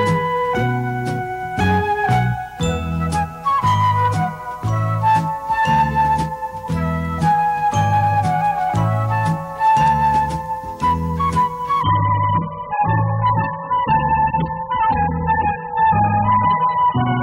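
An adaptive stream at a lower bitrate takes over at 11.82 s and runs to the end of the clip at 17.22 s. The player has evidently switched to a much leaner encoding, which fits a drop from roughly 96 kbit/s AAC to about 8 kbit/s. The change is abrupt and seamless, with no gap. From that point nothing is left above 4.5 kHz, so the sound turns dull and muffled, and codec artefacts rise.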